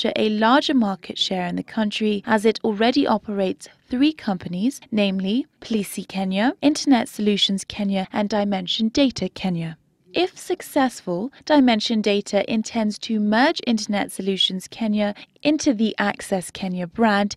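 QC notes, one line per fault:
No faults to note in this clip.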